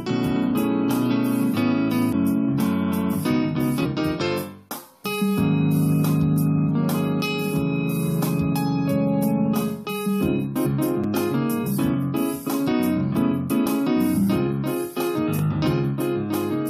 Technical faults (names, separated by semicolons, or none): damaged data in a compressed stream; block of digital silence